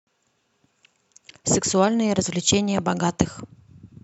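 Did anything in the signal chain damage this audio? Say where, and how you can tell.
No, nothing along the way seems to have damaged this speech recording, and there's nothing to point to at any stage from capture to playback.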